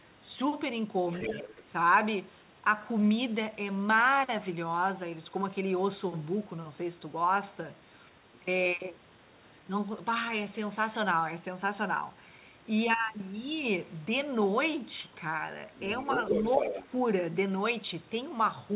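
Other side's voice leaking through, 1.09 to 1.63 s: a second voice about 10 dB below the talker, likely the far end's loudspeaker playback left behind by an echo canceller that didn't fully remove it. Inside it, speech suppressed in double talk, 1.28 to 1.48 s: the talker's level dips by about 5 dB for roughly 200 ms, likely because the canceller turned everything down while both sides overlapped. The leak returns very faintly, about 35 dB down, at 8.34 to 8.38 s, then loudly at 15.75 to 16.87 s, only about 5 dB under the talker. The G.711 mu-law call path limits everything to below 4 kHz, so the leaked voice sounds as band-limited as the talker.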